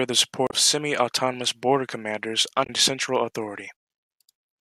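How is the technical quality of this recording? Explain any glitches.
The speech is marred by two brief glitches. Damaged data in a compressed stream appears at 0.45 to 0.54 s and again at 2.63 to 2.70 s, just after "border commanders". Corrupted bytes made the decoder misread frames and lose sync while hunting for the next header, producing short blips.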